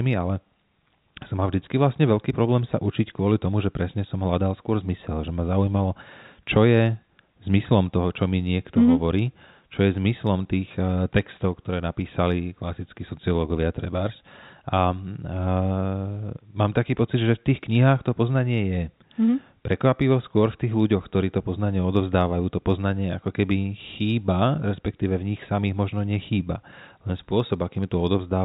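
Nothing goes wrong anywhere in this speech clip, which has the narrow, phone-line sound of G.711 telephone coding with nothing above 4 kHz getting through.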